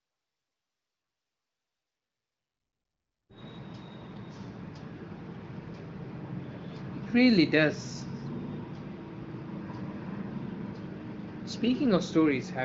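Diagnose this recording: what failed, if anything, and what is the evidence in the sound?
Nothing has gone wrong here that I can hear: the speech comes through an AMR wideband (HD Voice) path at a quality that fits one of its higher rates, around 18 kbit/s, with the top end stopping near 7.5 kHz as you'd expect from that codec, so there's no stage I'd point a finger at.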